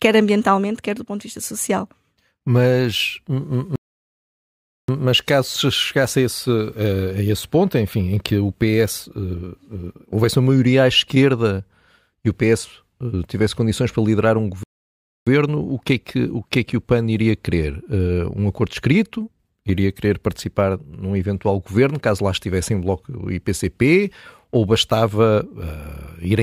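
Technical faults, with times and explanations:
3.76–4.88 s, playback stall: the speech just drops out for about 1.13 s, then picks up again with "mas caso chegasse a". Feels like the player likely starved for data or got its thread held up, so the output sat silent until it caught up.
14.63–15.27 s, playback stall: same thing, shorter, roughly 0.63 s of dead air right after "condições para liderar um", before the audio resumes mid-flow.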